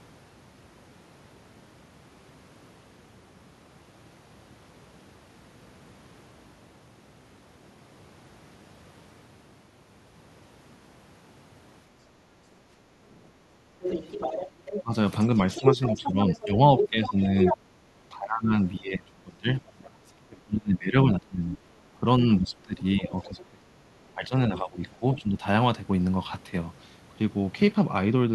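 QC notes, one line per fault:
12.85–13.76 s, background gated by the echo canceller: the room sound dips by about 7 dB, for about half a second in total. The canceller clamped the microphone while its loudspeaker played, so the ambience sinks and then recovers.
13.82–17.57 s, 23.10–23.44 s and 24.91–25.21 s, other side's voice leaking through: a second talker is audible under the main voice. It is strong in the first stretch, only a few dB below the speech, and faint in the two later scraps. Likely the canceller left some loudspeaker pickup in the microphone.
14.83–14.93 s, 15.58–17.16 s and 17.90–25.42 s, speech suppressed in double talk: the talker's voice dips and breaks up while the far side speaks. Drops are roughly 15 dB, then 10 dB, then a deep cut of around 25 dB across about five seconds in total. Likely the canceller could not separate the two and turned both down.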